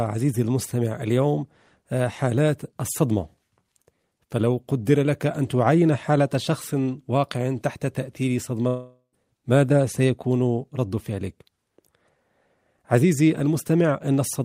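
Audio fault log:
8.67–9.15 s, long network dropout: The speech breaks off into a fading buzz that carries the last sound forward, then about 0.11 s of silence. Speech resumes with roughly 0.46 s missing. This is likely a network gap concealed by the receiver.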